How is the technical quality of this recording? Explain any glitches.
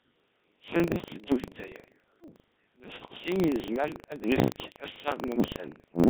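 The recording is poor. Three kinds of fault are audible in this speech clip.

Codec 2 vocoder, throughout. The speech is heavily damaged. It sounds robotic and buzzy, with a synthetic hollowness. That fits Codec 2 running at around 1.3 kbit/s. This vocoder does not keep the waveform. It sends only pitch, voicing, energy and a rough spectral envelope. The decoder then rebuilds the voice from sine waves. Natural texture is lost, and what remains sounds machine-made.

Buffer tearing, throughout. A steady rattle sits on the audio at 25 Hz. It appears only when there is signal. The writer of the playback buffer and the hardware reading it have drifted out of step. They now cross inside every period. A small slice of each buffer holds stale audio from about a tenth of a second earlier. Hard joins on both sides of that slice produce the buzz.

Bit errors on digital voice radio, 0.89 to 1.14 s and 5.28 to 5.39 s. 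The speech breaks into warbles and robotic gibberish. Pitch, level and tone colour jump abruptly. Corrupted bits reached the low-rate vocoder. Each bit controls a parameter for a whole frame, so one flip garbles a complete slice of sound. The first burst suggests an error rate of a few percent. The second, shorter burst sounds worse.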